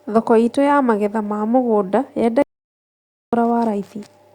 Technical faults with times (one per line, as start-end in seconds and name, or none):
2.42-3.33 audio dropout to silence